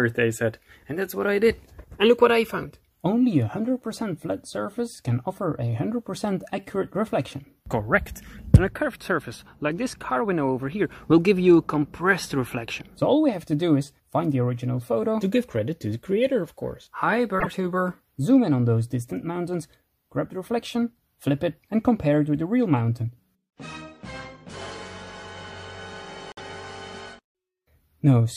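A short glitch occurs twice in the audio, at 17.39 to 17.47 s and at 26.32 to 26.40 s, each about 80 ms long. The disturbance spans roughly three 26.1 ms MP3 frames, so the likely cause is a broken MP3 bit reservoir. After frames go missing, the next frames reach back into reservoir space for data that now belongs to a different frame. They decode from the wrong bytes, and the audio skips ahead.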